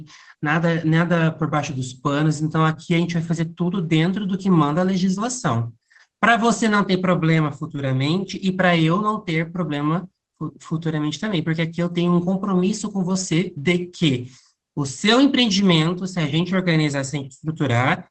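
Nothing's wrong with this speech clip: it has simply come through an ordinary Opus call connection with the high end trimmed at around 8 kHz, as that kind of path normally does.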